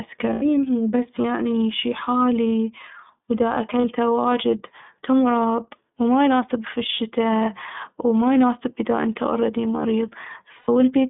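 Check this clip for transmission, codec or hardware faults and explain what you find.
Yes, two faults are audible: the whole clip has passed through the iLBC codec, and three short dropouts were concealed as lost iLBC frames.

The iLBC codec affects the entire recording. The speech sits in a telephone band of roughly 150 Hz to 3.6 kHz, with a slightly rough, synthetic edge. That roughness comes from coding each frame's excitation independently, and together with the band limit it fits iLBC's 30 ms, 13.33 kbps mode. A spectrogram would show a hard ceiling near 3.6 kHz and nothing below about 150 Hz.

The lost iLBC frames occur at 0.33 to 0.43 s (90 ms), 3.81 to 3.85 s (30 ms), and 10.58 to 10.69 s (90 ms), which fits three, one and three missing frames. The decoder fills each gap by repeating the last pitch cycle mixed with noise, which sounds like a held, buzzy vowel. The voice is right again almost at once afterwards. 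On a spectrogram each gap appears as flat, repeated harmonic bands with a noisy haze. In the waveform it appears as repeated periodic cycles mixed with noise that fade over the 90 ms gaps.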